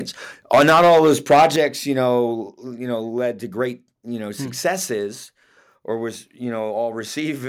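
From about 0.53 s to 1.6 s the speech is hitting the ceiling hard. The level is running roughly 10 dB past what the converter can take, and something like a tenth of the samples get their tops sheared flat. That's a microphone overload, most likely from the input volume being set too high. You hear it as a gritty, crackly edge riding on the loud syllables, ending right before "you know you know".

Inside that stretch there are two microphone volume steps down. The first, at 0.55 s, is small, about 2 dB, and the distortion carries on through it. The second, at 1.56 s, is much bigger, about 7 dB, and the speech and background together suddenly sit lower going into "you know you know". That's likely the call software spotting the clipping and pulling the device's input gain down in single jumps rather than a smooth fade.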